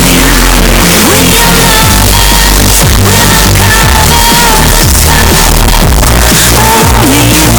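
Throughout the clip, 32-bit floating-point samples were likely read as 32-bit integers, so each sample's sign and exponent bits set its value. This float read as integer error drives the waveform to a near-square shape at an almost fixed, high level, making everything very loud and harsh. Quiet background noise comes out as loud as the main sound, though pitch can still be followed.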